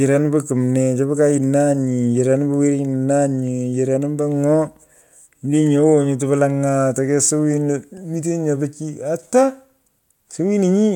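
No technical faults are audible.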